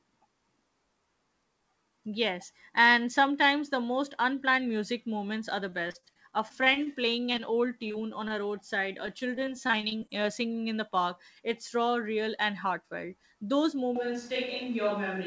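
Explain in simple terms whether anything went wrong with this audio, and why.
Between 5.70 and 7.54 s there is repeated packet loss, which gives a robotic sound. Parts of the audio kept failing to arrive, and each hole was patched by repeating the last sound. That leaves a choppy, metallic texture with small pieces missing, the longest about 50 ms. The same thing happens again from 9.06 to 10.26 s, between "on a roadside" and "singing in the park", with shorter gaps, the longest about 20 ms.

From 7.88 to 7.96 s, just before "on a roadside", there are two back-to-back cases of short concealed packet loss. Each is about 20 ms of audio that never arrived and was filled by continuing the previous sound. The result is a brief smear where a tiny slice is lost.

At 8.28 to 8.32 s, just before "a roadside", there is a short stall from a late packet. A piece of audio arrived about 23 ms late, so the last sound was stretched to cover the wait. 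Nothing is lost, but that moment is held slightly too long.

From 13.96 s to the end, the sound turns roomy and hollow, with less bass and more background noise, while the loudness stays about the same. This is likely a switch to a distant microphone, with the close microphone dropping out and a farther one taking over.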